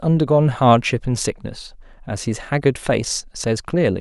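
No technical faults can be heard anywhere in the speech.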